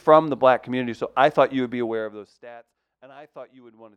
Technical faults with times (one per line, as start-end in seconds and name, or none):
1.68-2.55 zipper noise